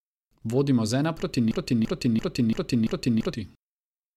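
From 1.51 to 3.33 s, a broken-record loop repeats a 339 ms fragment five times back to back, likely a stalled stream; the waveform and spectrogram show identical repeating blocks.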